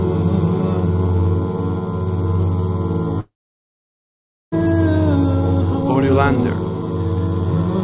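A long network dropout, likely a loss of incoming packets, cut about 1.3 s of audio from 3.2 to 4.54 s. The receiver extends the last sound into a brief fading buzz or hiss, then about 1.2 s of silence follows before the band-limited call audio, with nothing above 4 kHz, resumes with the missing stretch gone.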